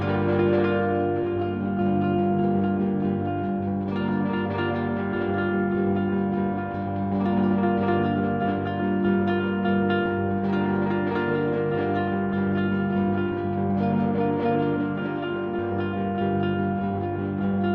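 No technical faults can be heard anywhere in this recording of sounds. Nothing in it calls for a timestamp or a closer look.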